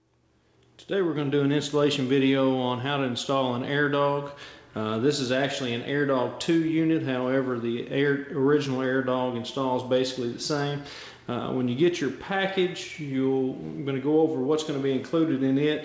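No technical faults can be heard in the audio, which has come through a WebRTC call path and carries nothing above 8 kHz, a band limit that fits the G.722 wideband codec.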